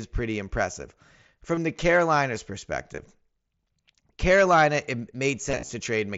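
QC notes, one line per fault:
1.55–1.57 s, 2.95–2.98 s, 5.51–5.69 s, concealed Bluetooth headset packet loss: packets dropped on the headset link and got filled by repeating recent waveform. The first, right after "pretty impressive", and the 30 ms one are short runs of lost frames; the last scatters losses over 180 ms, 105 ms lost in all.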